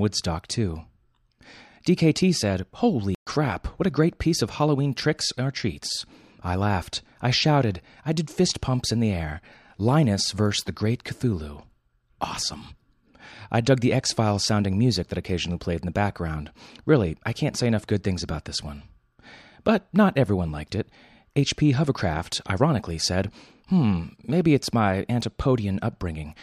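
At 3.15 s a playback stall, likely the player starving for data, silences the speech for 120 ms until 3.27 s, resuming at "what a great piece".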